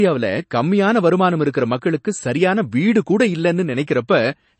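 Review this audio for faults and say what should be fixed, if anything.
Throughout the speech, the treble stops at a hard ceiling near 8.3 kHz, and the sound turns watery, with swirling, chirpy sibilants. This is likely MP3 compression at a low bitrate, around 32 kbps. Starved of bits, the encoder dropped everything above that frequency and let weak bands flicker on and off between frames. On a spectrogram this shows as a flat cutoff with speckled gaps beneath it. To prevent it, keep a lossless copy or encode at a much higher bitrate.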